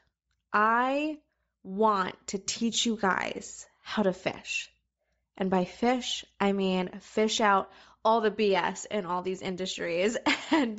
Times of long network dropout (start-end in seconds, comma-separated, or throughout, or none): none